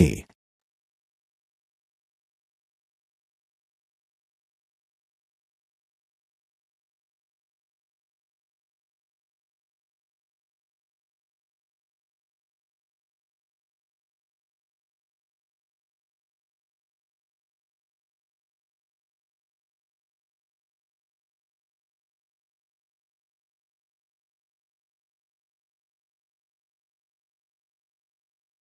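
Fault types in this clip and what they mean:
Nothing here counts as a fault; what you hear is just the ordinary character of a call connection, with the top end rolling off around 12 kHz.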